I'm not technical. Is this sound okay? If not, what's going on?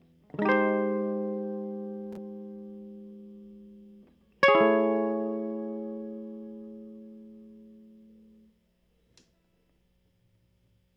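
Yes, this music sounds okay, and nothing is going wrong with it.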